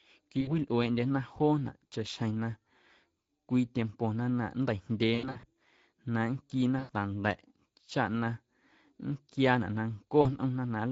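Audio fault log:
throughout: Speex codec. The audio has a plainly audible hoarse, noisy grain, which fits Speex at a middle setting of roughly 17 kbps. Too few bits go to the excitation signal, so voicing sounds rough rather than clean. Any content above 4 kHz is only a shaped noise fill. This hoarse, buzzy texture is typical of CELP coding and sets it apart from the swirling, watery artefacts of transform codecs such as MP3.
0.41–0.55 s, 5.15–5.45 s, 6.79–6.93 s, 10.21–10.27 s: VoIP packet loss concealed by the speech codec. About 60 ms, 180 ms, 100 ms and 40 ms of audio went missing. At 5.15 s the loss is scattered over about 280 ms, with gaps of up to 80 ms. The decoder extends the last pitch and filter with falling gain, so the sound smears into a fading buzz or coloured noise rather than dropping to silence. It also stays weak and distorted briefly after each gap, which sets it apart from plain dropouts.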